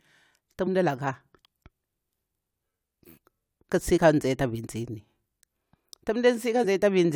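At 0.64 to 0.68 s, 3.94 to 3.98 s and 6.61 to 6.64 s, compressed frames are skipped in this speech. The decoder loses frames, so about 20 ms of sound vanishes each time.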